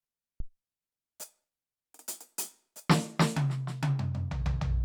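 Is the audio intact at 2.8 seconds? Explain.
Yes, the music plays through 2.8 seconds without any fault.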